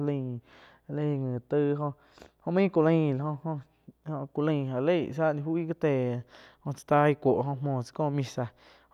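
No technical faults can be heard anywhere in the speech recording. There is nothing to mark at any point in it.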